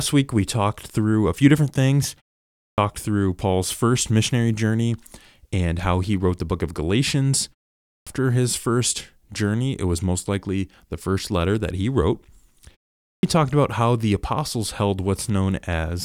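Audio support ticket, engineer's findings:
Clipped start after a pause: speech onsets cut off abruptly out of silence at 2.56 s (after "a few different things"), 7.82 s (before "his first journey it") and 13.00 s (before "talked about how the"), each losing about 220 to 250 ms following 0.32 to 0.43 s pauses. Output device sleeping in silence, slow to wake and relock.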